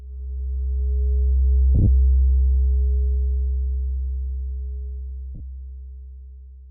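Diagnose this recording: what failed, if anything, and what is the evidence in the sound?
Lost LE Audio frames on the wireless link at 1.75–1.87 s and 5.35–5.40 s; LC3 concealment repeated the last spectrum with randomised signs, smearing tones into noise.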